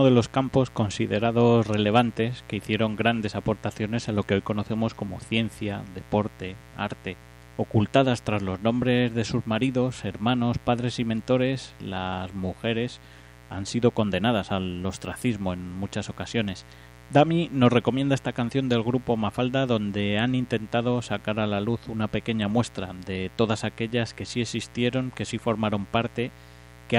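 Mains buzz runs throughout the speech, from start to finish. Sharp switching spikes, the kind a light dimmer, a rectifier or a missing shield lets into the signal path, arrive twice in each cycle of the 60 Hz supply, so the interference is a dense stack of 60 Hz harmonics climbing well into the kilohertz range. It sits roughly 25 dB below the speech and is heard as a steady, raspy buzz underneath every phrase.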